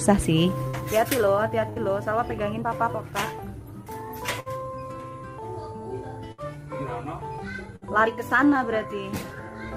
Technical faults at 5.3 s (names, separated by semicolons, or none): none